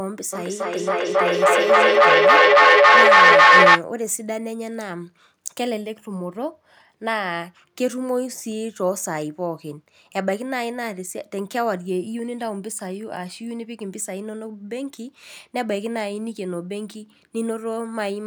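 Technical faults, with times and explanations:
0.33–3.86 s, feedback echo between two devices: the speech returns every third of a second or so and builds, peaking about 14 dB above the speech, as a second nearby device replays and recaptures it. Unlike a single room echo, the repeats grow thinner and ringing instead of fading.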